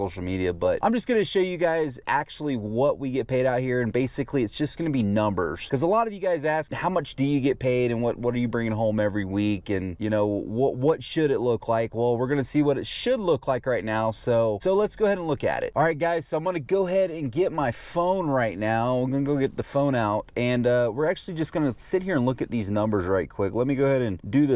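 Nothing in this recording stands out as a technical fault, so there's nothing to flag here.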